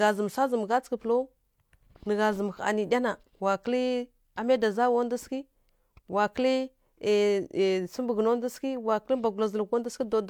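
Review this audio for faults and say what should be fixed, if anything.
No faults can be heard in this recording, so the signal needs no technical correction.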